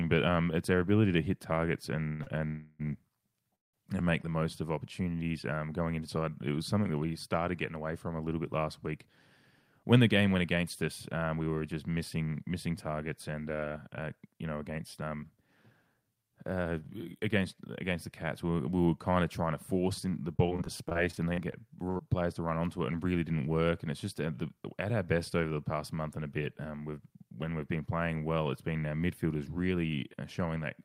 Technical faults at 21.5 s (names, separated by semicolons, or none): jitter buffer speed-up; repeated packet loss (robotic sound)